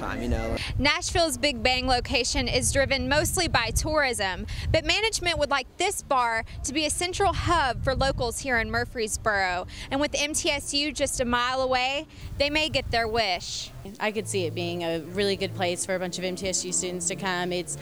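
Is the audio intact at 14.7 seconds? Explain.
No. At 14.7 s the audio has low bit depth without dither, from 12.21 s to the end. It sounds like 8-bit truncation with no dither, likely. The rounding error tracks the signal. Quiet passages turn grainy, with distortion around 35 dB below the sound.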